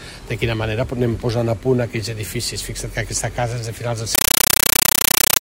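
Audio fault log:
4.15–5.42 s, compressed stream played as audio: the sound gives way to very loud, harsh chattering static, a rasping buzz made of short noise bursts about 9.3 ms long repeating 31.25 times a second, each followed by silence. That pattern points to a Dolby Digital (AC-3) stream, consistent with 448 kbps, being passed over the digital link and played as ordinary samples without decoding, so each packed frame comes out as a noise burst followed by zero padding.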